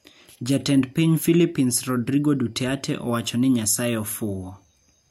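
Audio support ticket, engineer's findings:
No fault found on listening; the speech is continuous and intact with nothing to isolate to any component, so no action needed.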